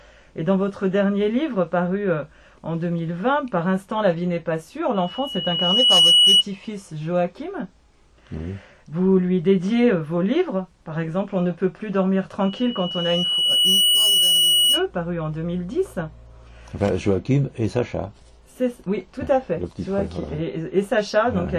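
At 4.94 to 6.44 s and again at 12.40 to 14.86 s, loudspeaker feedback squeal appears: the microphone re-captures its own loudspeaker until a 2.9 kHz tone runs away, swelling over about 1 and 1.5 s respectively and rising about 10 and 5 dB above the sound. A spectrogram shows one bright horizontal line at 2.9 kHz.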